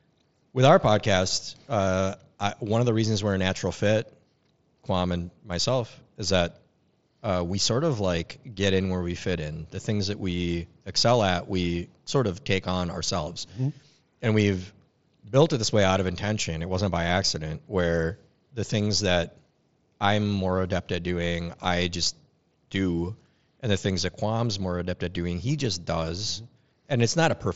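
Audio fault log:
No faults heard anywhere in this speech recording.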